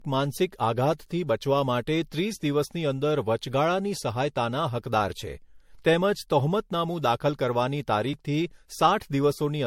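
Generation loss runs through the whole clip. The speech sounds swirly and hollow, consonant attacks are smeared, and nothing is left above about 16.5 kHz. The cause is likely repeated MP3 re-encoding, roughly seven passes at a rate that fits around 67 to 70 kbit/s. Each decode and re-encode quantises the signal again on a shifted frame grid, so noise and spectral gaps build up beyond what a single pass at that bitrate would leave.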